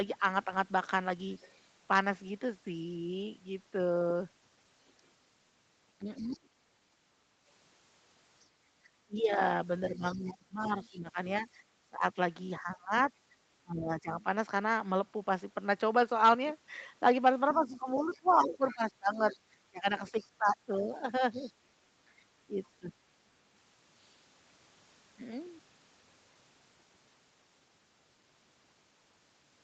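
At 1.33 to 1.54 s, a faint second voice sits under the speech, about 30 dB down. This is the other side's voice leaking through. Its likely cause is a loudspeaker echo the canceller did not fully remove. It returns louder from 4.88 to 6.37 s, about 25 dB below the speech. From 6.05 to 6.49 s, the main speech dips by up to about 30 dB, for around a third of a second in total. This is speech suppressed in double talk. Both voices overlap, and the likely cause is the canceller turning everything down. The leak comes back from 8.4 to 12.59 s and from 17.48 to 21.52 s, about 20 dB below the speech. Suppression follows each time, from 9.06 to 14.25 s and from 17.5 to 22.92 s. The speech drops in pieces, by about 20 dB, for roughly 2 s and 3 s.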